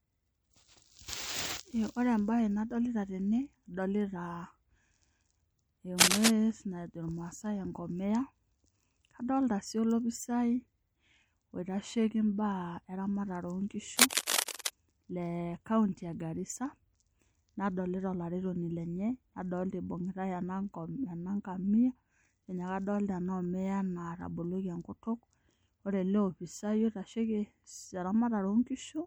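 MP3 compression runs throughout the speech, and its damage is plainly audible. The sound fits a low bitrate of around 64 kbps, likely leaving the encoder short of bits. Faint detail flickers in and out with a watery, swirly quality, and sibilants turn metallic.

Cable scratch noise appears from 5.98 to 6.32 s, somewhat louder than the speech, and again from 13.94 to 14.70 s, at roughly the speech's level. Each burst likely comes from a worn connector or cable being moved, so that rapidly changing contact resistance adds dense, uneven scratching and rustling over the voice.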